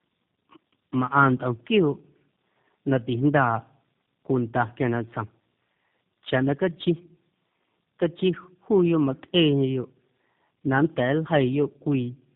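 Tandem speech coding runs through this whole speech recording: the signal was re-encoded by three speech codecs in a row, pointing to CVSD, AMR-NB and then G.729A, each working on the last one's damage. The speech sounds rough, muffled and warbly, with nothing above 3.8 kHz.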